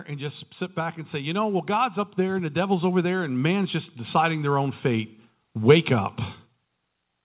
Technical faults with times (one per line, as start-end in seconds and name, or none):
0.07-5.93 automatic gain rising